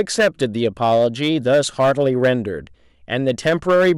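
Speech, with hard clipping throughout the recording. The signal was driven about 6 dB past what one stage in the chain could pass, so the loudest peaks are sliced flat at the ceiling. Only a small share of samples, roughly 3 percent, sit at that limit, so the damage is concentrated on the stronger syllables, where the squared-off waveform adds high harmonics heard as a gritty crackle riding on each peak.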